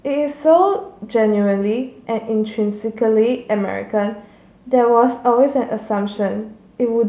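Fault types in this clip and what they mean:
No technical fault can be heard anywhere in the speech recording. There is nothing here to list under any fault type.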